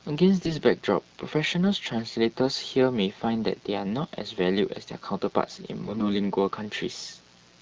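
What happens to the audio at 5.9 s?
Right there you're inside a burst of AMR bit errors, running from about 5.82 to 6.13 s. Bits in the less protected parts of the coded frames got flipped, a few percent of them, so the excitation pulses and fine pitch and gain values land wrong. The speech keeps its pitch and level but goes hoarse and gargly.

Underneath that, the mains buzz is still there, as it is through the whole clip. It's a raspy 60 Hz hum with harmonics climbing well up the spectrum, sitting roughly 30 dB below the speech, the kind of spiky interference a dimmer, rectifier or poor shielding lets in.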